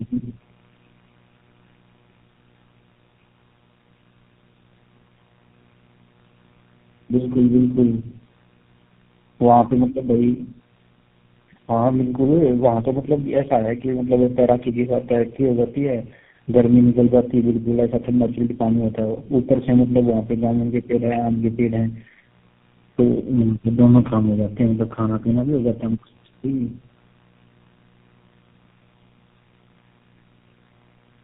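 Tandem speech coding runs through the whole clip. The speech was decoded and coded again at each link. Each coder worked on the previous one's damage. The result sounds rough, muffled and warbly. Nothing reaches above 3.8 kHz, which fits four narrowband speech codecs in a row.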